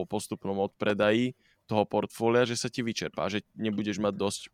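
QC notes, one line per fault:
0.90 to 1.06 s, loud pop: two sharp pops land back to back over the speech, roughly 10 dB above the talker, while the speech carries on underneath without a break. That's a sudden voltage step or spike riding on top of the signal, likely from a plug, switch, static discharge or driver hiccup. The downstream circuitry shapes each spike into that hard thump, which is why it sits so clearly apart from the voice.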